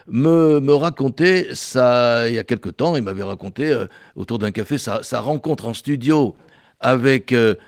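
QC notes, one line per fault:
No faults found: the speech comes through Opus voice compression in its hybrid mode with the full audio band kept, and the light coding traces fit a moderate bitrate of around 20 kbps.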